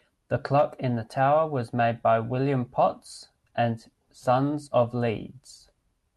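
The speech carries no audible technical faults.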